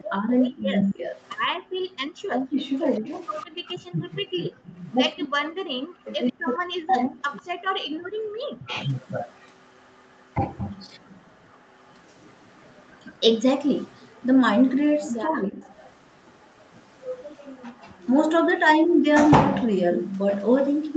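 From 0.0 to 8.75 s the speech keeps sinking and breaking up. This is speech suppressed in double talk, likely caused by both ends talking at once. The echo canceller could not tell the near talker from the loudspeaker echo, so it turned everything down. The dips add up to around four seconds. The deepest cuts reach about 40 dB, so pieces of the speech nearly vanish.

Between 0.48 and 1.29 s a faint second copy trails the speech by 145 ms. This is an echo leak, likely from a far-end loudspeaker whose canceller missed part of what its microphone caught. It sits about 20 dB below the speech and sounds like a delayed shadow.

At 1.49 to 1.62 s the room sound drops out for roughly 150 ms. This is background gated by the echo canceller. While the loudspeaker played, the canceller clamped the microphone by about 40 dB. The background then snapped back.

From 3.41 s to the end, the echo leak returns at the same 145 ms delay. 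It is quieter now, about 35 dB under the speech. It is a faint ghost behind the speech.

From 7.76 to 8.14 s the background is gated again. The gap is longer, near 300 ms, and again about 40 dB deep.

From 15.26 to 15.63 s the speech is suppressed in double talk once more, likely from overlapping talk. It dips by about 20 dB for around 400 ms.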